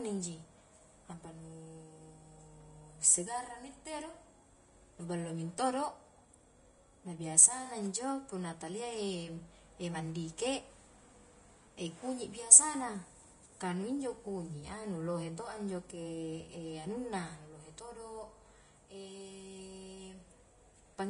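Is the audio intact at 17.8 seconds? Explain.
No, at 17.8 s the speech sounds hissy and grainy, with nothing above 10.5 kHz, throughout the clip; likely Vorbis compression at roughly 30 kbps, coarsely quantising treble into noise.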